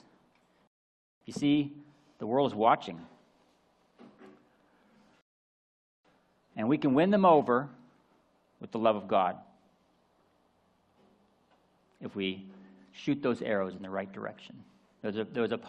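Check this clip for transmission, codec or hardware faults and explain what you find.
Two interruptions show up, both of one kind. Rebuffering stall, at 0.67 to 1.21 s and 5.21 to 6.05 s: playback exhausted its downloaded audio and waited for more, so the sound drops to silence for about 0.54 s and 0.84 s, then resumes exactly where it stopped, adding time without losing any sound.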